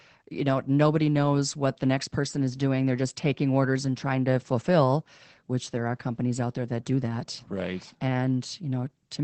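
Throughout the speech, the sound is muffled, hoarse and faintly robotic, with nothing above 8.4 kHz. That is Opus voice compression: its SILK linear-prediction coder, held to wideband, codes the excitation coarsely, which fits a bitrate around 12 kbps.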